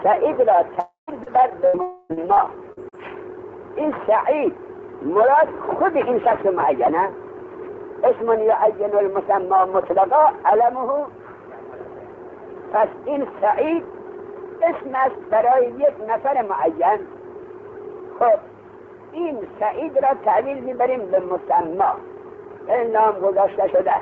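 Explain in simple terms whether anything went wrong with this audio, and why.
Several things went wrong, all in the first three seconds.

From 0.80 to 1.10 s and again from 1.82 to 2.12 s, the sound stretches into a fading buzz. About a quarter second is lost each time. The first gap also ends in a short silence. This is likely a long network dropout, where the connection briefly stopped delivering audio.

At 1.23 s there is a quick smear or wobble. This is short concealed packet loss. A few hundredths of a second never arrived, so the receiver patched the hole by briefly continuing the last sound.

From 1.66 to 1.77 s the sound turns into a short held buzz or fading hiss, and then jumps ahead. This is a burst of packet loss. Several pieces in a row went missing, so about 80 ms of audio is gone.

From 2.13 to 2.95 s the sound turns choppy. This is repeated packet loss. Four small holes appear close together, each patched over. 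Together they cover nearly a fifth of that stretch.

The sound came through a call system that passes nothing above 8 kHz.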